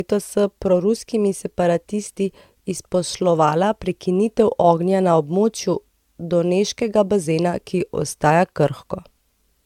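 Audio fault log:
throughout, generation loss. The speech sounds swirly and hollow, with a smeared wash behind it. Consonant onsets lose their edge and blur. This is more damage than a single pass at a moderate bitrate would leave. The likely cause is repeated lossy encoding, here consistent with AAC-LC at around 96 kbit/s, applied a few times over. Each decode and re-encode quantises on a shifted frame grid, so noise and spectral gaps pile up.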